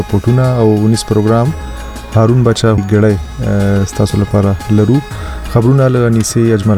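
At 2.77 s a CD skip occurs: the laser lost its track and jumped to another turn of the disc's spiral. A tick and a brief mute of a few milliseconds are heard, and the sound resumes from a different point. The waveform shows a near-flat gap and a discontinuity, while the spectrogram shows a thin vertical broadband line.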